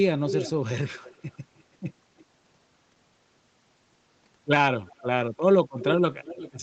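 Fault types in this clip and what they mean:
Echo leak: A delayed copy of the speech comes back, likely because the far end's echo canceller missed part of what its loudspeaker fed into its microphone. The copy trails the original by about 330 to 350 ms, and the delay grows slightly across the clip. It is strongest near the start, at about 5 dB below the speech. Later scraps are faint, around 25 to 35 dB down. The return at the end is louder again, about 15 dB down.
Dropped buffer (overrun): Short pieces of audio are lost, and the sound on either side is joined with no gap. This likely happens when samples are overwritten before the program reads them. Each loss is heard as a small jump forward, at 2.41, 4.36 and 5.36 s. The first two skip roughly 10 ms, which fits a buffer of that length. The one at 5.36 s skips about three times as much.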